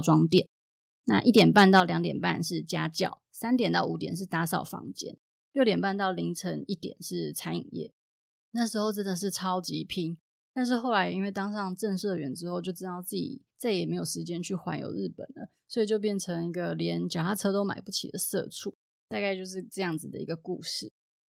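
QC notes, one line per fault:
1.37 to 1.8 s, microphone overload: the loudest peaks here get flattened and pick up a harsh, crackly edge. The likely cause is input gain set so hot that the peaks ran about 6 dB past the converter's ceiling, chopping off a small fraction of samples.
1.8 s, microphone volume stepped down: right after that distorted stretch, voice and background both drop about 7 dB in one sudden step. That's likely the call software reacting to the clipping by pulling the device's input volume down at once rather than gradually.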